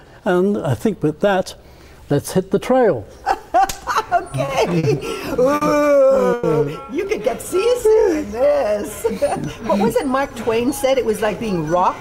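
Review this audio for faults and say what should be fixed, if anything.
Three short stalls from late packets hit at 4.45, 4.78 and 5.55 s. Each time the buffer ran dry and held the last sound for 30, 50 and 60 ms before carrying on.

At 6.33 to 6.46 s there's a call audio freeze: about 100 ms of buzzy or hissy, fading continuation, then the audio picks up right where it stopped. This is likely packets getting held up in transit.

From 7.56 to 8.66 s the jitter buffer slow-down stretches things to 93% speed by repeating pitch periods. That adds 81 ms and gives a drawn-out feel.

From 10.49 to 11.08 s the jitter buffer speed-up trims pitch periods to run at 107%, cutting roughly 50 ms to shed built-up delay.

The fix is on the network side: smooth out the packet delivery jitter, or give the jitter buffer a steadier, slightly deeper target so it isn't constantly stalling and resizing.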